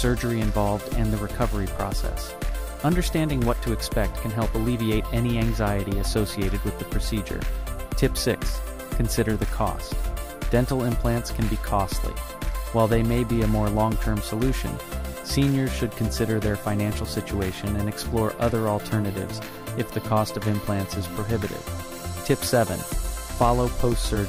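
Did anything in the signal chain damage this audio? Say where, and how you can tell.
No, nothing along the chain seems to have harmed this audio, so there's no stage to point to and nothing here that needs chasing down.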